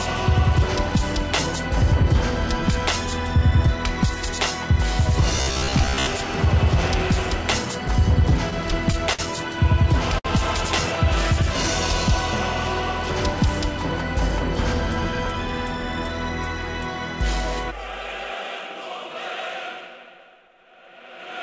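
Between 5.36 and 6.07 s the audio turns into a rigid, metallic buzz at about 66.7 Hz, the robotic sound from repeated short buffers. That pitch corresponds to a 15 ms period, which points to a 15 ms chunk being replayed again and again while fresh audio arrived too seldom. Most of this stretch is repetition rather than new material. The real audio under it is skipped, so the original contour survives only loosely beneath the imposed tone. The likely cause is buffer underruns on the capture or playback side.

From 7.88 to 9.21 s there are repeated stalls (stutter). Packets arrived late or slower than playback, so the jitter buffer ran dry seven times. The receiver bridged each gap by extending the last sound, about 107 ms in total, with the longest hold at 52 ms. Nothing is lost, but roughly 8% of the span is filler. The sound drags and hiccups, with the longer holds fading.

At 10.19 to 10.27 s a single short stall from a late packet occurs. 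The packet missed its slot, the buffer emptied, and the receiver stretched the preceding sound by 59 ms until it arrived, then resumed at the same point. No audio is missing. One moment is simply held too long, giving a brief smeared sustain with a faint buzz or a small dip in level.

Between 14.32 and 15.34 s there is a jitter buffer speed-up. Having accumulated excess delay, the receiver trimmed it by cutting out short pitch-period segments repeatedly, about 40 ms in all. Playback runs at 103% speed with pitch unchanged, so this second's timing tightens slightly.

Throughout, the WebRTC call path's G.722 coding leaves nothing above 8 kHz, which fits a 64 kbps wideband setting.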